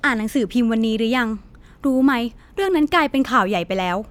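No technical faults can be heard anywhere in the speech.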